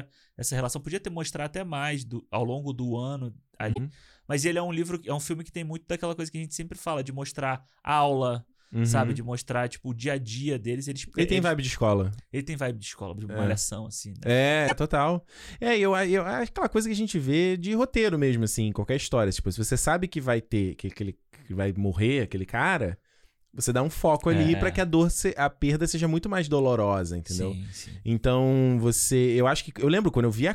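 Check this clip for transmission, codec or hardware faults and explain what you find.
Two spots of damaged data in a compressed stream show up in this speech clip. The first runs from about 3.70 to 3.78 s, right after "ao longo do ano", and the second from 14.64 to 14.72 s, just before "é total". Each lasts about 80 ms. Part of the encoded stream arrived corrupted, so the decoder couldn't read those frames, lost sync and had to hunt for the next valid frame header. That leaves a brief, abrupt disturbance in the audio each time.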